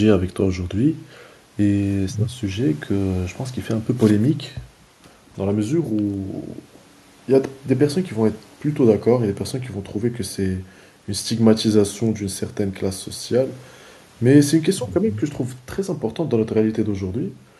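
Nothing here trips any alarms: the speech runs along without a single technical fault turning up anywhere in it.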